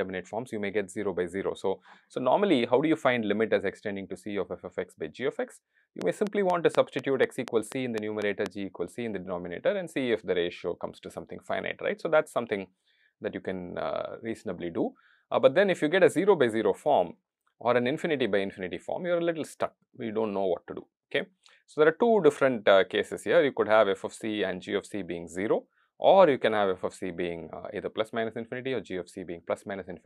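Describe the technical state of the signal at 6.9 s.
At 6.9 s you're in the middle of a train of clicks running from about 6.02 to 8.47 s: roughly ten evenly spaced pops, 4.1 per second, poking well above the sound, around 15 dB. Likely something injecting pulses, like nearby equipment interference or a faulty connection.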